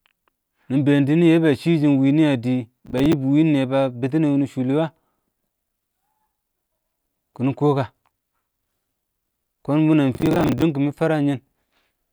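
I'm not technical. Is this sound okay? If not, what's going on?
No. Processor overload crackle at 2.86–3.13 s and 10.15–10.62 s: the computer fell behind, replaying stale chunks of roughly 10 ms, heard as gritty tearing over the speech.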